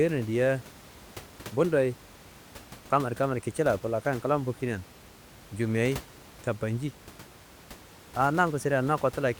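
No technical faults can be heard in this recording.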